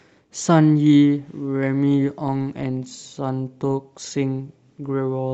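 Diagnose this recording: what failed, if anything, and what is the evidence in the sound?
Nothing in the signal chain failed: the speech arrives continuous and intact, with no dropouts, clicks, level jumps, distortion or timing disturbances at any point in the recording.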